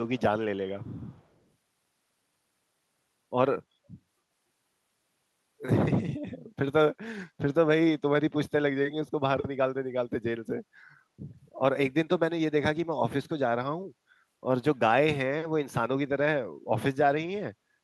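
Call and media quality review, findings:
Echo leak, 0.83 to 1.42 s. Faint delayed copy of the speech trailing the direct sound by 265 ms. Very low level, far beneath the talker. Short burst, about 0.6 s. Likely component: far-end echo canceller on a loudspeaker device. Its microphone picked up the loudspeaker output. Cancellation did not remove all of it. The remainder was sent back down the call.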